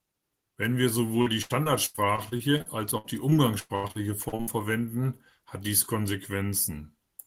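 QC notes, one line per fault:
1.21–4.49 s, repeated packet loss (robotic sound): the speech turns choppy, with pieces missing, until it clears just before "verwenden hat dies". About twenty short holes, the longest near 0.1 s, come one after another. Each is patched by stretching the last bit of sound, so roughly a quarter of this 3.3 s stretch, about 0.8 s in all, is synthetic filler rather than real audio. That gives the robotic texture.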